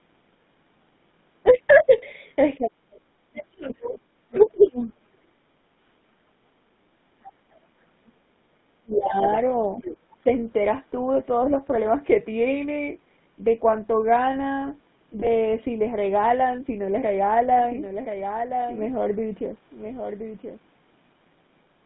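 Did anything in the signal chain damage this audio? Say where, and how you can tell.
Yes. At the codec stage, the GSM full-rate codec at 13 kbps confines the whole clip to about 150 Hz to 3.7 kHz and adds a buzzy, gravelly roughness. A plain band limit would not add that grit.

Lost GSM frames, a network and codec fault, occur at 1.98–2.03 s (40 ms) and 15.20–15.26 s (20 ms). Each gap holds as a brief metallic ring rather than dropping into clean silence, which sets it apart from a simple dropout.

Speech suppressed in double talk, from the call processing stage, likely causes the speech to dip and break up from 2.58 to 4.65 s, falling by roughly 40 dB at its deepest.

Other side's voice leaking through, also from call processing, enters at 4.34–4.93 s about 10 dB below the speech and at 9.24–9.38 s about 20 dB below. This points to likely residual loudspeaker echo rather than steady crosstalk.

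A doubled audio track starts abruptly at 17.6 s and runs to the end. A full-band copy trails about a second behind, roughly 5 dB quieter. It has no decay or room colour, which rules out reverb, and the likely cause is a second capture path or an edit.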